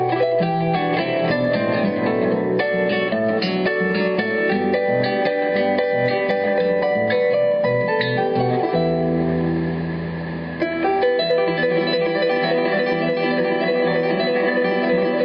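Gain pumping runs through the whole clip. The gain swings by about 20 dB. This is likely input gain set far too high, with a fast limiter clamping down. The sound comes across squashed, with everything band-limited to 8 kHz.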